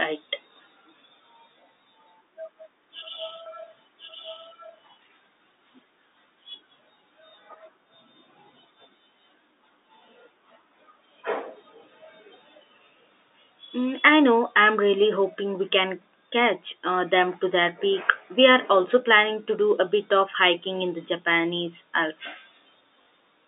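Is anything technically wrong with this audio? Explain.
Yes, this telephone-band speech has two faults.

A doubled audio track runs from 3.46 to 4.88 s. A second full-band copy of the speech follows about a second behind, roughly 5 dB quieter. It has no decay or room colouring and switches in and out abruptly. The likely cause is a slower second capture path or an edit that left two offset copies.

Packet loss with last packet repeated occurs at 23.02 to 23.06 s. About 40 ms went missing, which fits two 20 ms packets, and the receiver replayed the last one to fill the gap. This gives a brief robotic stutter near the end.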